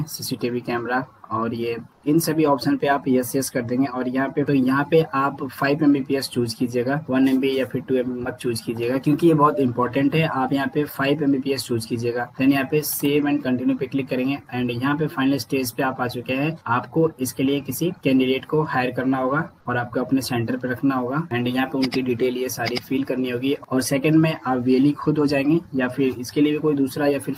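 At 1.92 to 2.02 s, comfort noise replaces the background for about 100 ms: the real ambience, about 38 dB below the loudest parts, gives way to a smooth, featureless hiss about 4 dB quieter, likely from Opus discontinuous transmission. Unlike a dropout or noise gate, the pause is filled rather than silent.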